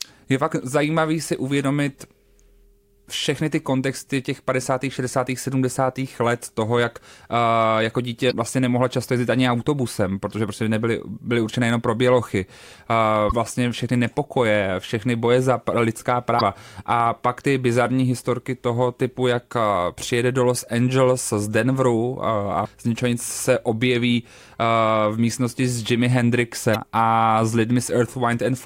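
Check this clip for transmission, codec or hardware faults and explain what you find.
There's one fault, damaged data in a compressed stream, hitting five times for about 0.04 s each: 8.27 s (after "toho jak uh jako", before "vlastně nemohla často jezdit"), 13.29 s, 16.37 s (after "všechny boje za lidská"), 22.61 s (before "z ničeho nic se"), and 26.71 s. Corrupted bytes throw the decoder off sync, so each spot breaks up briefly while it hunts for the next good frame.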